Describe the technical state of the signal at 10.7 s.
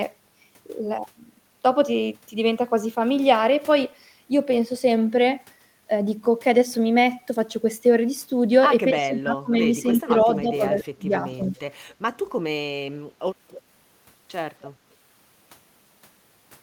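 At 10.7 s the speech sits inside a stretch of speech suppressed in double talk, running from 9.97 to 11.56 s. The level ducks in pieces, at its deepest by about 20 dB, totalling around a second of affected signal. The likely cause is an echo canceller that, with both ends talking, could not separate near speech from loudspeaker echo and attenuated everything. On a waveform the envelope collapses in patches, and a spectrogram shows the upper harmonics fading to gaps.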